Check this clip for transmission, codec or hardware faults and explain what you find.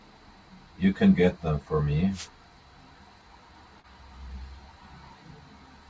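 Two faults stand out in this speech.

Wireless microphone noise hit, 2.11 to 2.29 s: the FM radio link from the microphone faded as reflected signals cancelled, so receiver noise rose over the voice. It comes through as a brief swish of static lasting under a fifth of a second.

Short concealed packet loss, 3.80 to 3.87 s: about 40 ms of audio never reached the decoder in time, and the receiver filled roughly 37 ms of it by extending the preceding sound before blending back into real audio. It is heard as a short smear.

The call path itself is audible as a band limit with nothing above 8 kHz, which fits a wideband G.722 codec at 64 kbps.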